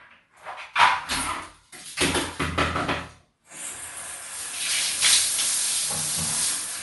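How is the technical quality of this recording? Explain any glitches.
The recording carries plainly audible codec damage from start to finish, most likely from Bluetooth LC3 compression. The sound has a grainy, breathy texture, and nothing reaches above 11.5 kHz, so the top end is dull. LC3 codes the audio in 10 ms blocks and, when bits are scarce, discards much of the upper spectrum and fills the gaps with shaped noise. That noise fill is what gives the hiss-like grain, which fits a bitrate around 48 kbps.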